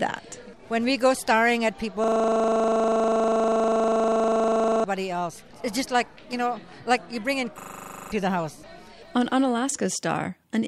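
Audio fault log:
2.04–4.84 s and 7.60–8.12 s, system hang loop: the system stalled while the sound hardware kept replaying one 40 ms stretch. That gives a rattling buzz at 25 Hz, about 70 repeats and then 13, swallowing roughly 3 s and half a second of audio.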